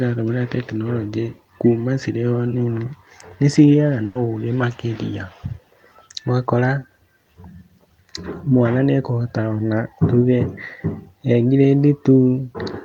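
At 4.05 s, just after "nĩ cigĩaga", the speech suffers a burst of packet loss lasting until about 4.17 s. Several consecutive packets never arrived in time, so the receiver stretched the last sound it had over roughly 100 ms, fading it as it went. The result is a brief held buzz or hiss, and the speech then picks up about 100 ms further on with that stretch missing. The gap is never silent, which separates it from a mute or dropout, and its length sets it apart from a single lost packet.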